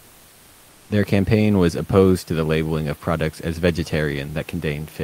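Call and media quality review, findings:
Comfort noise in place of the background, 0.0–0.89 s: flat, featureless hiss instead of the real room noise, about 2 dB quieter. Likely the sender's discontinuous transmission (DTX), which fits Opus.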